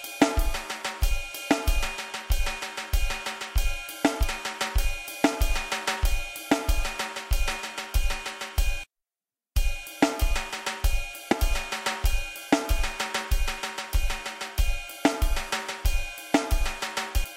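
Four brief chirps or blips break into the sound at 4.23 s, 8.87 s, 11.31 to 11.33 s and 17.23 s, each lasting only a few hundredths of a second or less. They come from damaged data in a compressed stream. Bytes at those points were lost or corrupted, so the decoder misread the affected frames, lost sync and searched for the next valid frame header before the audio resumed.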